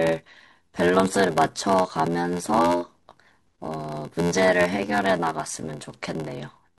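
The speech runs through a steady buzz at about 86 Hz for its whole length, the signature of a block size mismatch (padded). The writing stage delivers shorter blocks than the reading stage expects, and each block's shortfall is zero-filled, leaving a brief silent gap once per block. The buzz rate fits a 512-sample read block, and the gaps stretch the speech to 0.861 of normal speed while its timbre stays.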